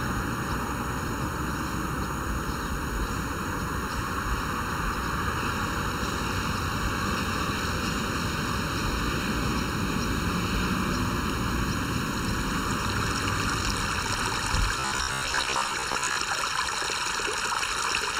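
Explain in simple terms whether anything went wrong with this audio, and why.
Throughout the clip, the sound is hollow because of channel delay (comb filtering). One channel arrives just under a millisecond late, and when the two are mixed together, matching parts cancel at evenly spaced frequencies, starting around 700 Hz.

From 14.80 to 16.16 s, the sound turns into a rigid, metallic buzz at 66.8 Hz, a robotic sound from repeated short buffers. Likely cause: audio arrived too slowly, so roughly half of that stretch was filled by repeating the last 15 ms chunk over and over.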